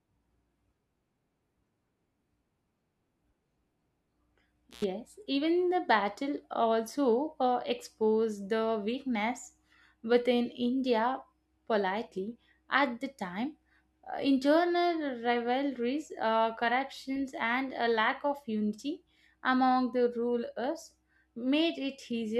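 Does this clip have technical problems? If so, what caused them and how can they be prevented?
Yes, there's a brief intermittent contact dropout from 4.71 to 4.84 s, just before "even the battle also". A loose plug or cable opens for about 96 ms, cutting the speech with crackle at each edge. Reseat connectors firmly and replace worn cables.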